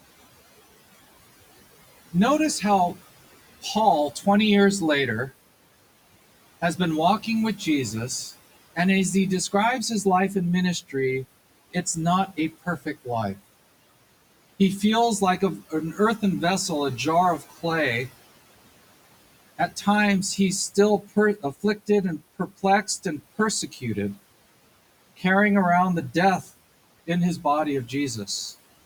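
Right from the start and all the way through, the speech has a hollow, slightly phasey colour. That's channel delay causing comb filtering. One channel is running roughly 10 ms behind the other, and when they're folded to mono, whatever the two share cancels at evenly spaced frequencies. The first notch sits down around 50 Hz, with the rest stacked up the spectrum. It sounds like talking through a tube, and the effect doesn't move.

At 19.58 to 19.87 s, just before "he's still", the noise suppressor cuts into the speech. It mistakes a soft stretch for background and pulls it down by about 10 dB over something like a tenth of a second, so that bit comes out swallowed. It happens again at 21.39 to 21.89 s, right before "and perplexed and". This time the dip goes to about 12 dB, again for around a tenth of a second in total. The faint room noise, sitting about 21 dB under the speech, is simply the room and not a fault.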